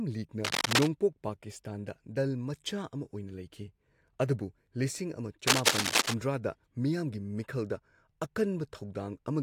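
Cable scratch noise, likely a worn connector or cable shifting, lays dense, uneven scratching about 5 dB above the speech from 0.44 to 0.87 s and 5.47 to 6.14 s.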